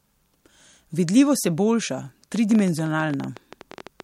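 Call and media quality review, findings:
Train of clicks, 2.36 s to 4.01 s: some twenty similar pulses at an uneven pace, about 12 per second, peaking roughly 5 dB above the speech and audible in pauses too. Likely cause: electrical interference or a struggling interface. Added ticks, not dropouts, since no audio goes missing.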